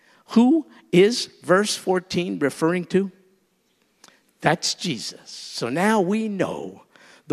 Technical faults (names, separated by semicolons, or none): none